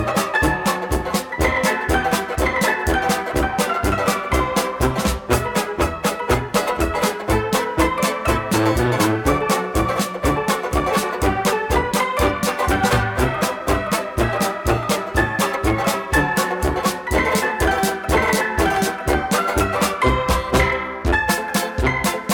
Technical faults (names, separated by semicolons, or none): none